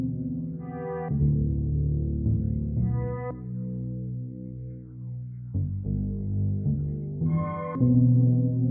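No technical faults are audible.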